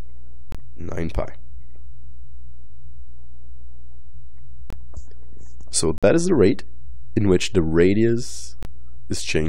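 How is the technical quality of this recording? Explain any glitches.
Four short holes, all corrupt frame muted: 0.52–0.55 s, 4.70–4.73 s, 5.98–6.04 s and 8.63–8.65 s. The decoder rejected damaged compressed frames and the player dropped in silence, so the sound cuts abruptly to nothing for 24 to 60 ms, then resumes on time.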